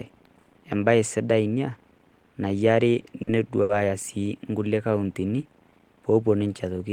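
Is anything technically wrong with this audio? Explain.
Yes, there are two network-playback problems in this speech clip.

From 3.00 to 3.70 s, just before "sii inkulie", there's a stutter of repeated stalls: the jitter buffer ran dry four times as packets arrived late, and the receiver stretched the last sound to cover the gaps. That's 140 ms filled in total, up to 70 ms at once. Nothing's lost, but the speech drags and hiccups.

Then from 4.87 to 5.51 s, right after "sii inkulie", there's a jitter buffer slow-down. With the buffer running low, the receiver repeated single pitch periods to rebuild its reserve, adding 87 ms. Speech plays at 88% speed with unchanged pitch, so it sounds drawn out.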